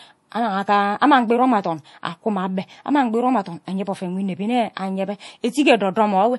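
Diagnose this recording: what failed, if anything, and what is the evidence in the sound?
The codec stage failed, most likely through MP3 compression. Throughout the speech, nothing sounds above about 11.5 kHz, and damage is plainly audible. Short of bits, the encoder cut the treble and switched weak frequency lines on and off, which fits roughly 48 kbps.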